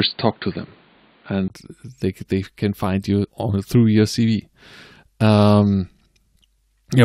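It's a speech clip. For the first 1.5 s the sound is dull and boxy, with nothing above 4.7 kHz, a faint noise floor about 45 dB down and a level roughly 5 dB off. Then, after a 20 ms gap, it opens up just before "they they can find". That's likely the input switched to a poorer device and back. Later, between "they they can find" and "on through your cv", around 3.24 to 3.26 s, roughly 20 ms of audio jumps ahead. That's compressed frames skipped.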